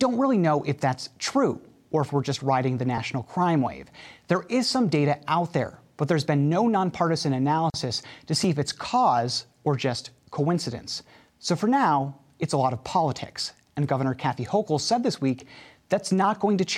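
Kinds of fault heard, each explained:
Dropped buffer (overrun): at 2.98 s, between "we're just riding the" and "crime wave", and at 8.44 s, just before "if it's cause or", the sound jumps forward with no silence. The likely cause is the recording program failing to collect its samples in time, so the hardware overwrote them and the two sides were spliced together. Only a few milliseconds are lost at the first spot and a millisecond or two at the second.
Gap at a join of encoded pieces: from 7.70 to 7.74 s, right after "there's been no nonpartisan", a hole of about 39 ms opens in otherwise continuous sound, its edges smeared by the codec, and the audio then resumes where it left off. Separately encoded sections were joined without trimming, so the encoder's start-up delay and the padding on the final frame remain in the file as silence.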